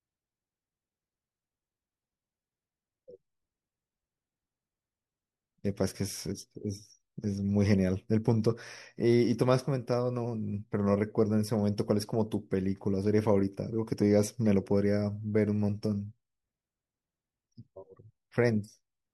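Speech, with nothing technically wrong with it.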